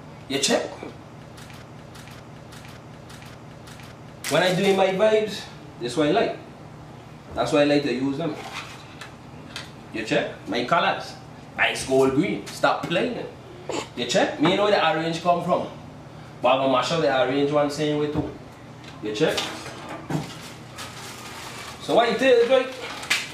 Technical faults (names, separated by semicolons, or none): broken-record loop